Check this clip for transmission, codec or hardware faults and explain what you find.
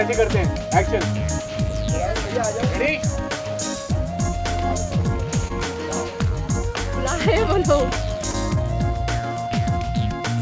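Two brief dropouts stand out. Short concealed packet loss at 5.48–5.51 s and 8.31–8.35 s: about 20 ms of audio arrived too late, and the receiver extended the preceding sound before blending back, leaving a short smear. The call path's band limit shows as nothing above 8 kHz.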